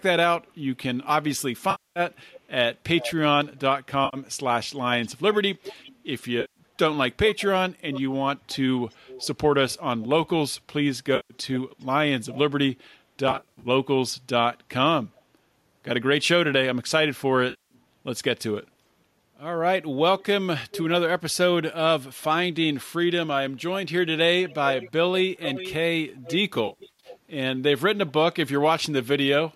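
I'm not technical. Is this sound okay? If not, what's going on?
No. Two problems come and go throughout.

Echo leak: a second copy of the speech trails about 0.4 s behind, likely from a loudspeaker whose echo canceller let some sound return. It happens at 0.0–1.08, 2.11–2.4, 2.99–3.13, 4.76–5.9, 7.32–10.07, 11.8–12.38, 20.19–20.83 and 24.48–27.18 s. It is a repeat, not damage.

AAC frame loss with concealment: short pieces of audio went missing and were filled with a smeared, hazy patch built from the last good sound. It happens at 1.71–2.0, 4.05–4.17, 6.41–6.59, 11.16–11.34, 13.31–13.68 (scattered), 17.5–17.74 and 26.67–27.07 s (scattered), each losing up to a quarter second of sound in total.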